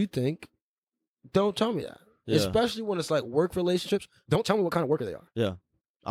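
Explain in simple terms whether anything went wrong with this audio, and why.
Something did go wrong near the end. Right after "when it's like work", at about 3.81 s, the speech suddenly runs about 1.73 times faster and stays that way to the end of the clip. It sounds rushed, yet the voice keeps its normal pitch. That points to a time-stretched section, likely from software squeezing the audio to fit a length by dropping short slices. A simple speed-up would also make the voice squeaky and higher.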